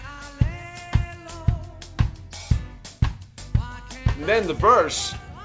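Nothing stood out on listening, and the audio shows only the expected top end of a wideband call codec, with nothing heard above 8 kHz.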